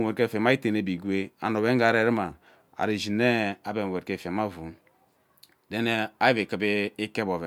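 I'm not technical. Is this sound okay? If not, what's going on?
Yes, this sound is okay; nothing is going wrong in it.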